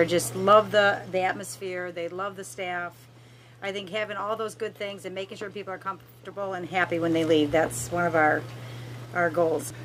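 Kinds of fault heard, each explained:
Zipper noise: Between 0.42 and 1.81 s the level drops by roughly 15 dB, but it comes down in unsmoothed 2 dB jumps, around five a second. Each jump leaves a little click, so you hear a ticking zip riding on the fade.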